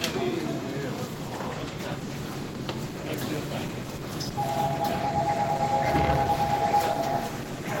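From 1.14 s to the end, the quality abruptly drops with rising codec artefacts. This is an adaptive stream at a lower bitrate, consistent with Opus dropping from 64 to 16 kbit/s.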